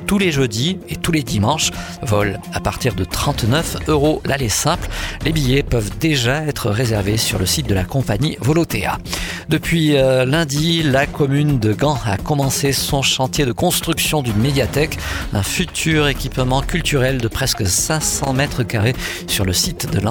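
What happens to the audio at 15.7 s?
Loose connector crackle, from 15.69 to 15.79 s: a worn contact briefly makes and breaks, chopping the signal into a short, irregular burst of scratchy crackle.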